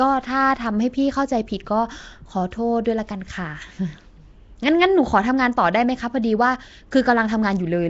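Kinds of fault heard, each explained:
Nellymoser compression: Throughout the speech, a rough, hissy halo clings to the voice, there is a smeared, underwater blur, and nothing sounds above 7.7 kHz. This points to a 32 kbps stream from Nellymoser Asao, likely the cause. That Flash codec spends a fixed two bits per sample on short blocks and fills starved bands with noise. A spectrogram shows a hard 7.7 kHz ceiling and speckled, blocky noise between harmonics. The waveform looks grainy.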